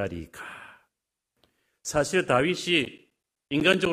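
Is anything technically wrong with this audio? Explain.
Yes. From 2.85 to 3.86 s the speech has regular ticks every 0.125 s, each a silent gap of about 10 ms. These are periodic USB or driver dropouts, where the bus or driver stalls on a fixed cycle.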